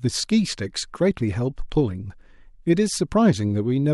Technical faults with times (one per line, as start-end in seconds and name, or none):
none